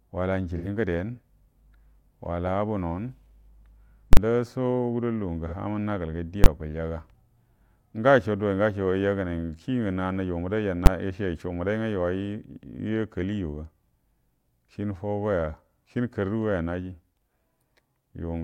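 AAC frame loss with concealment at 0.57 to 0.68 s: a span of about 85 ms, which points to two lost AAC frames, is rebuilt by the decoder from the last good spectrum, with the energy carried forward and the phases scrambled, so the speech turns briefly smeared and noisy before clean decoding resumes.

Invalid numbers at full scale at 4.13 to 4.17 s: a calculation broke down and produced invalid values that were pinned to the maximum output level for 40 ms. The result is a loud pop at each edge of the block with nothing audible between them.

AAC frame loss with concealment recurs at 5.47 to 5.53 s, a gap of about 43 ms that fits a single lost frame. The patch is shorter than the first.

Invalid numbers at full scale return at 6.44 to 6.46 s, a 20 ms block that lands as one sharp bang, and again at 10.86 s, where a 10 ms block gives a single loud click.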